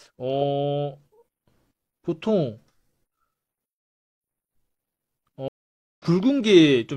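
Speech that drops out completely from 5.48 s to 6.05 s, a gap of about 0.52 s, and then resumes about half a second further on, skipping material. This is a stream reconnect: the connection broke, the player fell silent, reconnected and restarted decoding mid-stream.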